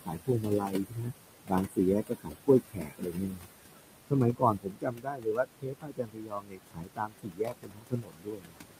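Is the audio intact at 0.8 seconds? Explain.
No. From 0.06 to 1.13 s, speech cut by the noise suppressor turns the speech down by as much as about 20 dB, so parts of the speech sound swallowed or faint, unlike a dropout, where the signal vanishes completely. Noise suppressor artifacts also run throughout, with the background pushed down about 21 dB, so the noise sinks between the words and rises under them rather than staying steady.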